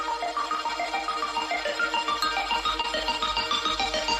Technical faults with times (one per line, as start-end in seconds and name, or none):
2.81-2.85 short concealed packet loss